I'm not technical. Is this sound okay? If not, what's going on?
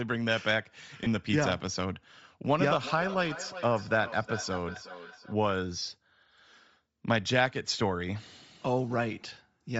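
No. The whole clip has a breathy, grainy edge and little sparkle at the top, likely from Bluetooth LC3 compression squeezing the speech to fit a wireless link.

There are lost LE Audio frames at 1.04 to 1.07 s and 5.79 to 5.82 s. Tiny chunks went missing, and the gap was filled with a brief noisy smear.

From 2.64 to 5.36 s there is feedback echo between two devices. Another device in the room replays the speech, and it comes back roughly every four tenths of a second, thinner each time.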